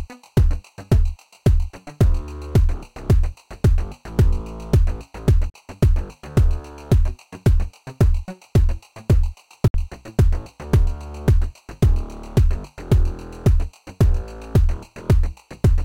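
A sound recording with two silent gaps, at 5.50 s for about 41 ms and at 9.68 s for about 61 ms. Each resumes as if it had played on, likely a Bluetooth dropout of a few late packets.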